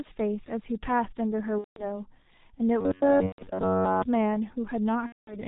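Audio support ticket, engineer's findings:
G.723.1 codec, whole clip: speech muffled and hoarse, nothing above 4 kHz, smeared consonants. Heavy low-rate coding, consistent with about 6.3 kbit/s and 30 ms frames.

VoIP packet loss concealed by the speech codec at 1.58–2.01 s, 3.26–3.46 s and 5.06–5.40 s. Decoder extrapolates its last pitch and filter, giving fading sound; speech stays weak after packets resume.

Robotic sound from repeated short buffers, 2.81–4.03 s: rigid metallic buzz at 93.8 Hz following the speech roughly. Likely a roughly 10.7 ms block replayed almost continuously while new audio is skipped.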